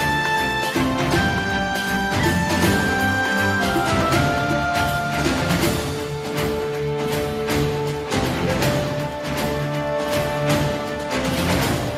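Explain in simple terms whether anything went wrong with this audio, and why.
Nothing went wrong with this audio; listening all the way through, there are no faults to point to at any moment. The sound carries on steadily without any break, glitch or sudden change that would signal a technical problem.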